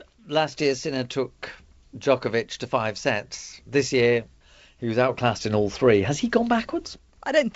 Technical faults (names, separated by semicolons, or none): none